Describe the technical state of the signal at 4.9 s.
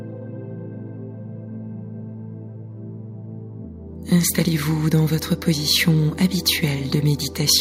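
Nothing at 4.9 s disrupts the signal; the audio is intact at that point.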